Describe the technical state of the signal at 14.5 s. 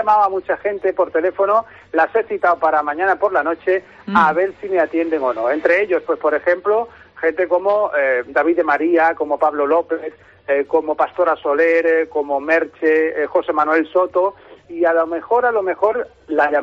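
At 14.5 s the signal is intact, with no audible fault at that moment.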